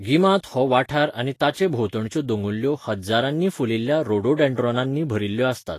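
Throughout, the speech sounds hissy and grainy, with nothing above 14.2 kHz. This is likely Vorbis compression, and the sound fits a bitrate near 34 kbps.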